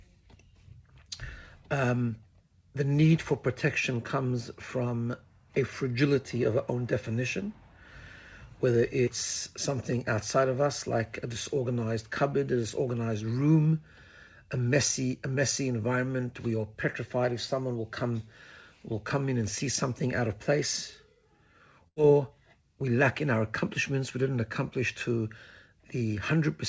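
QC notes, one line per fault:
9.05–9.10 s, short concealed packet loss: about 30 ms of audio failed to arrive in time, and the receiver bridged it by extending the preceding sound for roughly 20 ms before blending back, heard as a brief smear. On a spectrogram, a short smoothed stretch; the waveform shows a small seam.
21.88–21.99 s, burst of packet loss: about 90 ms went missing in a row, and the receiver stretched the last sound for around 80 ms while fading it, so a held buzz or hiss decays before the audio resumes further on. Spectrogram shows a frozen, dimming band; waveform a tapering envelope.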